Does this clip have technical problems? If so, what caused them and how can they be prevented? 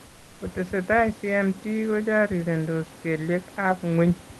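Yes. From 0.06 to 0.40 s, a stretch of about 340 ms, the background is replaced by comfort noise: a steady, featureless hiss, about 3 dB quieter than the room tone around it, which sits about 27 dB below the loud parts. The likely cause is Opus discontinuous transmission: the sender stopped sending during the pause, and the receiver filled the gap with synthetic noise. Like the rest of the call audio, this noise stops near 12 kHz. Disabling DTX in the Opus encoder settings prevents it.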